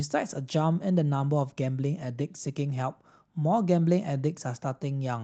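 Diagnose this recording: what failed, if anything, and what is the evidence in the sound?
A short stall from a late packet occurs at the network and jitter-buffer stage, 0.73 to 0.77 s. The speech holds 18 ms too long, with a slight buzz or dip. Nothing is lost. The buffer ran dry, stretched the last sound, then resumed.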